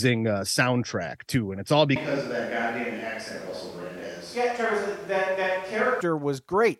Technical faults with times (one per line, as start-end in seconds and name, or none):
1.96-6.01 switch to a distant microphone